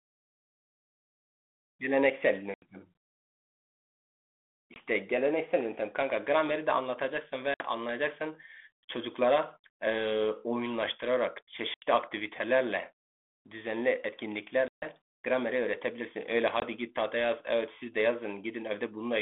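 Packet loss on an ADPCM call breaks the speech at 2.54–2.63 s, 4.74–4.78 s, 7.54–7.65 s, 11.74–11.83 s, 14.68–14.88 s and 16.60–16.63 s. Roughly 20 to 140 ms goes missing each time, which fits 20 ms packets, and is replaced by hard-edged silence. Because the receiving decoder's predictor and step size drift from the sender's during each gap, the speech re-enters slightly distorted, before settling over some tens of milliseconds.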